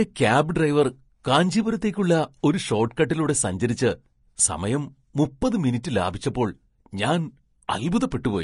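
From start to finish the speech sounds hissy and grainy, with roughened tones and smeared consonant attacks, likely from Vorbis compression at a low setting, consistent with a bitrate near 35 kbps. A spectrogram shows nothing above 10.6 kHz, and the upper treble appears speckled and noise-like rather than finely detailed.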